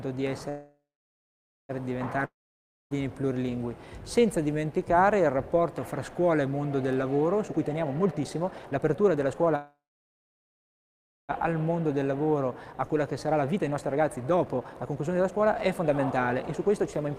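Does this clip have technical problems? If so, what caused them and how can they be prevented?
Yes, there are three kinds of fault.

Call audio freeze at 0.49–1.71 s and 9.56–11.31 s. The sound stops and its last moment is stretched into a fading buzz, then silence for about 0.9 s and 1.5 s. The audio then resumes exactly where it left off, so nothing is lost but it runs about 1.2 s and 1.7 s later. Both were likely caused by packets delayed in transit until the jitter buffer emptied. On a spectrogram each shows a smeared, decaying copy of the last spectrum followed by a blank band, and the waveform goes flat. A larger adaptive jitter buffer and a more stable network path with QoS prioritisation would prevent this.

Long network dropout at 2.25–2.93 s. The last sound fades into a brief buzz, then about 0.6 s of silence follows. The audio returns further along, with roughly 0.66 s permanently skipped, likely because packets were lost outright. 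A spectrogram shows a fading smear, then empty space and an abrupt restart. Packet redundancy or forward error correction would prevent it.

Jitter buffer speed-up at 7.45–9.55 s (145% speed) and 11.69–17.17 s (132% speed). After the freezes, the receiver trims short pitch-period slices to shed excess delay, roughly one and two seconds respectively. The audio sounds hurried at unchanged pitch. On a spectrogram, harmonic spacing stays the same while events crowd together in time. Gentler, slower buffer draining would prevent this.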